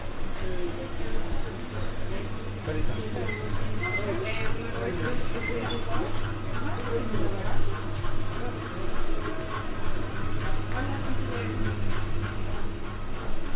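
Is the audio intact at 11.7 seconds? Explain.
Yes, the audio is intact at 11.7 seconds, with nothing above 4 kHz because it passed through a narrowband call path that fits G.711 A-law.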